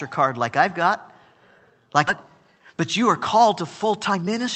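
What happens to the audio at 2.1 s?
Right around 2.07 to 2.09 s there's a skip ahead: about a second of speech got dropped while later audio was already queued, so playback jumps straight across with no gap. Then from 2.16 to 4.48 s the jitter buffer speed-up kicks in, trimming tiny pitch-period slices to shed the backlog, so speech runs at 116% with unchanged pitch and sounds rushed.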